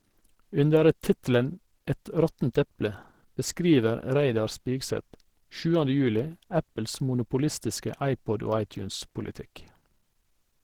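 From start to finish the speech sounds hoarse, grainy and muffled, with a rough, noisy texture to the voiced sounds rather than a swirling one. The top end still extends to about 20.4 kHz, so the loss is in texture rather than bandwidth. The cause is likely Opus compression at a low rate, which fits roughly 16 kbps, where the encoder's hybrid speech mode thins out detail and fills gaps with noise.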